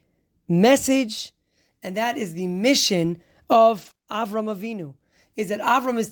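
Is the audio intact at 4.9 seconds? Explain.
No. The speech carries CD scratch ticks from 4.49 to 5.70 s. A scratch wipes out more data than error correction can rebuild, once per disc turn. The player patches the gaps. You hear eight short ticks, about six a second, the longest around a millisecond long.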